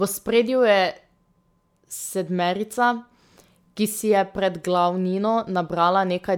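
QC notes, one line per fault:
No fault to note.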